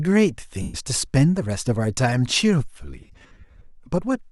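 Lost LE Audio frames in this speech clip at 0.62–0.74 s and scattered through 2.99–3.64 s, in runs of up to about 50 ms: the LC3 decoder replays the last spectrum with random signs, smearing sound into fading noise.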